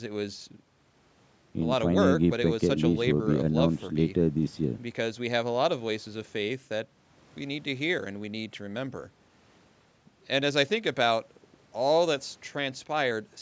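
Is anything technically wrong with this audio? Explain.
No, nothing technically wrong.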